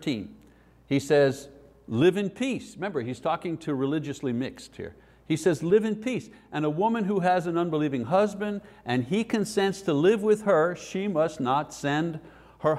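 No technical faults can be heard anywhere in the audio.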